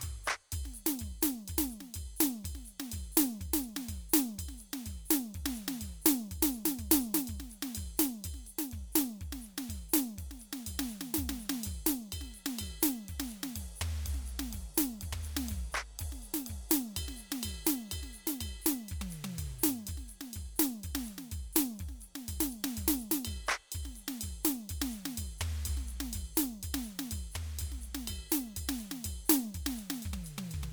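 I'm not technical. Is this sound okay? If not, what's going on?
No. Throughout the music there is generation loss: a swirly, watery texture, a hollow and smeared tone, and sharp starts that sound blurred rather than crisp. This is likely the result of the file being saved as an MP3 about four times over. Each re-save throws away a little more detail in slightly different places, so the small damage from each pass piles up into the washed-out sound you hear.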